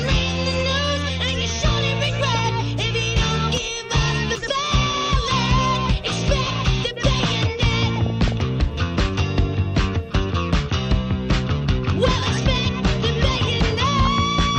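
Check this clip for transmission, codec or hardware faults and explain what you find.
DAB burbling appears five times: 0.56 to 0.70 s, 2.34 to 2.39 s, 5.75 to 6.07 s, 7.96 to 8.32 s and 13.97 to 14.07 s. Weak reception lets a small fraction of a percent of bit errors slip past error correction into the MP2 stream. Corrupted samples then put short blips of noise into single sub-bands, and corrupted scale factors push individual sub-bands briefly up or down in level, producing burbling blips over the sound, most extended in the two bursts around 6 and 8 s.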